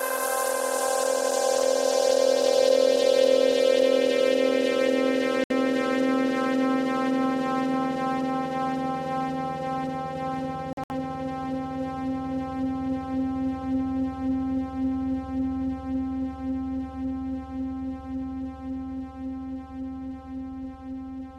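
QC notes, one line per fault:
5.44–5.51 s, Bluetooth dropout: audio packets likely missed the wireless link's deadline and were discarded, cutting the sound to silence for 64 ms before it resumes mid-stream.
10.73–10.92 s, Bluetooth dropout: late packets were likely dropped in scattered bursts, leaving gaps totalling about 107 ms, the longest 64 ms, so the sound stutters before continuing.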